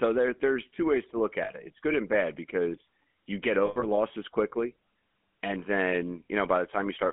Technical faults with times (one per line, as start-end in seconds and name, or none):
0.00-7.13 GSM full-rate codec
1.44-1.51 lost GSM frames
3.66-3.86 lost GSM frames